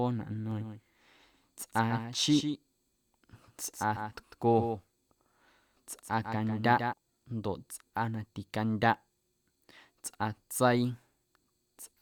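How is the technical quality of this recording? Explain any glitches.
A doubled audio track runs from 0.51 to 6.93 s: a second copy of the speech trails about 150 ms behind, around 10 dB quieter, likely from a slower capture path.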